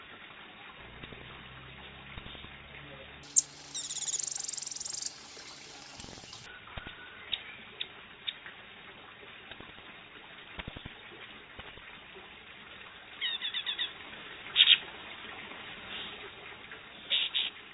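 From 3.23 s to 6.46 s the audio has a wrong sample rate fault: it runs at twice normal speed and a full octave (12 semitones) higher, which fits material recorded at 8 kHz being played back at 16 kHz without any rate conversion.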